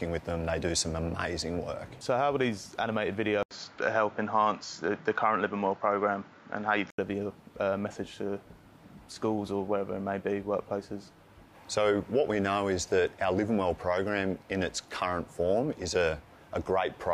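At 3.43 s the sound goes dull and boxy after a gap of 80 ms, with nothing above 7.3 kHz. A faint new noise floor, about 40 dB down, appears. Level holds steady. It clears at 6.98 s. This is likely an input switched to a poorer device.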